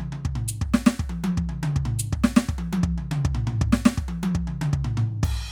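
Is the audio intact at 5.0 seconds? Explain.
Yes, the music plays through 5.0 seconds with no dropout, click or other technical fault at that moment.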